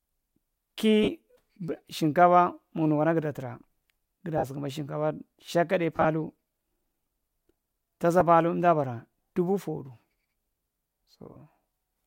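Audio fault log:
1.03–1.08 s, 4.38–4.44 s, 5.96–6.06 s, 8.20 s and 11.33–11.36 s: lost LE Audio frames. The gaps last 45, 52.5, 60 (scattered across 90 ms, longest run about 30 ms), 7.5 and 30 ms. Their lengths fit multiples of 7.5 ms frames. Instead of a silent gap or click, the LC3 decoder refills each hole with the previous spectrum at random phase, so the speech briefly turns into a hissy, pitchless smear.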